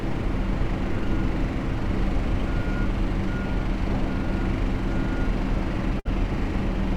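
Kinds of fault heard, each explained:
Burst of packet loss: At 5.99 s, a run of audio data arrived too late or not at all. The receiver stretched the last sound for about 57 ms, fading it down. About 60 ms is missing, and the sound resumes at 6.07 s.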